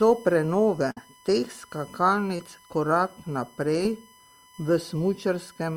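A speech recording with a USB whine and three packet-loss events. Current drawn by the USB bus in 1 ms frames is leaking into the audio path through the power or ground, and throughout the clip this adds a steady whine fixed at 1 kHz, strongest at that fundamental and sitting roughly 30 dB below the speech. At 0.91 to 0.97 s a burst of packet loss left the decoder without about 60 ms of audio. The receiver covered roughly 51 ms of that by stretching the last received sound and fading it down, so the speech turns into a brief held, dimming tail. It then resumes a little further on, with the section in between missing. Twice more, short concealed packet loss briefly starved the decoder. From 2.36 to 2.40 s, just before "korak naprej", about 20 ms went missing and around 25 ms was synthesised from the preceding sound before blending back in. This is heard as a quick smear or wobble. At 3.84 s, just after "korak naprej", a smaller gap of about 10 ms was patched with only a few milliseconds of fill, leaving another brief smear.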